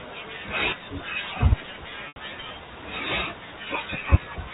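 Packet loss with pitch repetition occurs at 2.08 s, lasting 80 ms until 2.16 s. The receiver bridged the gap by replaying the last pitch period, so the speech briefly holds on a buzzy, sustained tone that fades toward silence before normal audio cross-fades back in.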